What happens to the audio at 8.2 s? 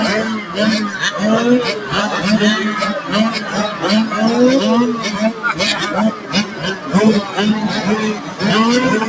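Between 8.14 and 8.41 s the sound sinks, dropping by about 8 dB at its deepest, with whatever was sustaining or fading there pulled down and its tail cut short, while any sharp onsets largely survive. This is sound cut by the noise suppressor: a speech-oriented suppressor judged this stretch to be noise and attenuated it more than its surroundings, so the roughly 300 ms span dips instead of decaying naturally.

That dip sits inside a broader problem that runs through the whole clip: a noise suppressor applied to music or sounds. Because the suppressor treats steady tones, ambience and reverb as noise, its gain swings by around 10 dB as material comes and goes. Attacks pass while held parts and decays are pushed down, which makes the level pump and thin out.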